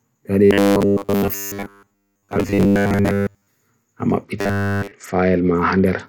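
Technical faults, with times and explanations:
0.45 to 3.47 s and 4.39 to 4.91 s, robotic sound from repeated short buffers. The speech becomes a rigid, metallic buzz fixed at 100 Hz. It still follows the words loosely. Audio likely arrived too seldom, so the playback repeated its last slice to fill the gaps. A 100 Hz buzz fits a 10 ms slice. In the first stretch most of the sound is repeated. In the second, all of it is.
4.24 s to the end, Bluetooth SBC bit pool drop. The treble goes dull and a gritty noise rises under the speech. This lasts to the close of the clip without recovering. The sound fits the encoder cutting its bit pool from 31 to 9, near 72 kbps. With so few bits, the top sub-bands get almost nothing. The remaining bands are quantised coarsely. The buzz above overlaps this stretch briefly.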